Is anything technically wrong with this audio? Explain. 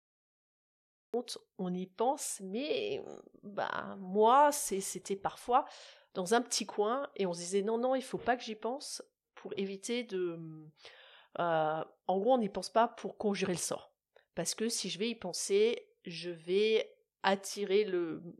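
Yes, the speech clip has a cut-off start. The first 1.14 s is digital silence, and the speech then begins abruptly at 1.14 s, already partway through a sound with no natural attack or fade-in. This happens when recording or streaming starts late and catches the speech mid-utterance. On a waveform, a flat line jumps straight to the speech signal. A spectrogram shows blank space ending in a hard vertical edge of energy.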